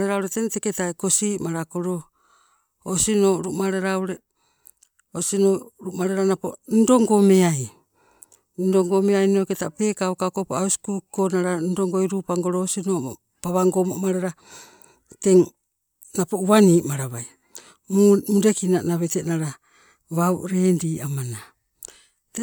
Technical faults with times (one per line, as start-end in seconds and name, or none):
none